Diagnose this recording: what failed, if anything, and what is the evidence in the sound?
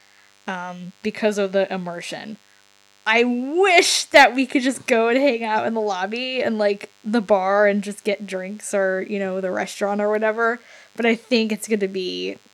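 DECT cordless phone buzz runs through the whole speech recording, from start to finish, roughly 35 dB below the talker. The evidence is a thin, steady buzz with a 100 Hz fundamental and a dense stack of harmonics, never changing in pitch. It enters at the analogue stage: a nearby DECT handset or base transmits a radio burst every 10 ms, and the microphone wiring or preamp rectifies it into audio.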